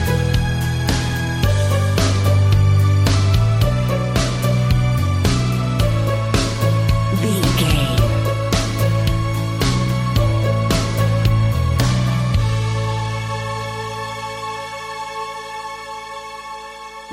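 No technical faults can be heard in this audio, so there is nothing to describe in time order.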